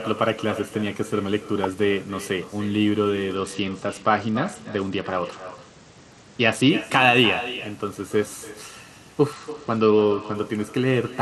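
From start to finish there is echo with no canceller: the far end's loudspeaker feeds its microphone and nothing subtracts it, so every phrase returns roughly a third of a second later, about 15 dB down, as a thin shadow.

From 3.35 to 6.70 s and again from 9.33 to 10.35 s, the Bluetooth SBC bit pool drops. The link starves the encoder of bits, which fits a fall from 31 to 10, near 77 kbps. The treble goes dull and gritty noise rises until quality returns.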